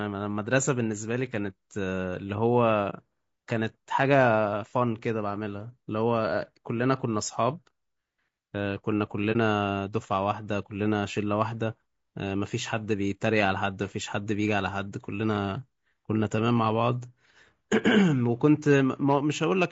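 From the first moment the speech has a rough, grainy texture, with a hiss-like fill between the harmonics and a top end that sounds thin and synthetic. That is low-delay AAC compression, most likely AAC-ELD, the kind used on video calls. Its short frames can't separate the pitch harmonics cleanly, and squeezing it down to a low rate, which fits something like 32 kbps, leaves the damage plainly audible.

Then there are two brief holes where the audio just drops out, at about 2.90 to 2.94 s and again at about 9.32 to 9.36 s. These are AAC frame loss with muting. Each gap sounds like a single lost frame of roughly 30 ms that the decoder filled with silence. Because the overlapping windows fade the sound down and back up, the edges are soft, just a quick dip to nothing.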